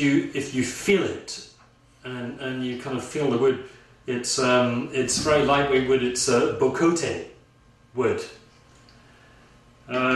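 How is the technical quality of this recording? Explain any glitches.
No technical glitches can be heard anywhere in the recording. There is nothing in it that calls for an explanation.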